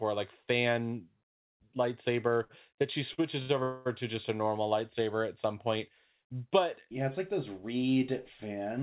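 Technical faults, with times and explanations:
2.44–2.51 s, 3.13–3.20 s and 3.42–3.51 s, short stall from a late packet: a packet missed its slot, the jitter buffer ran empty, and the receiver held the last sound for 54, 45 and 70 ms before resuming. Nothing is lost, but sounds either side of "that she" drag briefly with a faint buzz.
3.63–3.87 s, call audio freeze: packets were likely held up in transit, draining the jitter buffer. The receiver filled 225 ms by stretching the last sound into a fading buzz that never reaches silence, then picked up at "to just a normal", late but complete.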